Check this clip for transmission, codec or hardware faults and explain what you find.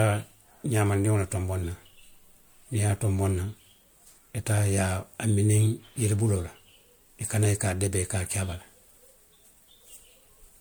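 There is one codec fault, present throughout the speech: generation loss. The audio was likely passed through a lossy MP3 encoder about three times, at a quality that fits a 96 kbit/s chain. Each re-encode quantises the signal again on a shifted frame grid, so the errors from each pass stack up. The speech therefore sounds swirly and hollow, with smeared consonant onsets and a watery haze beyond what a single encode at that bitrate would leave.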